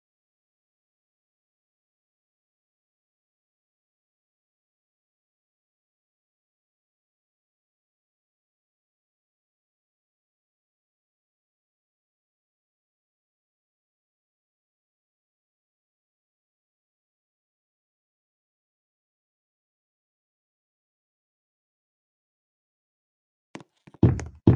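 No technical faults can be heard anywhere in the audio.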